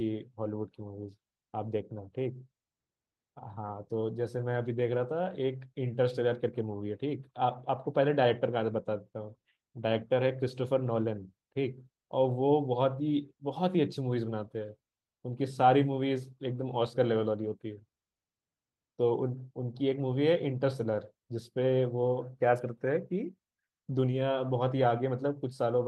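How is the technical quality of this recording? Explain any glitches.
No glitches or faults are audible.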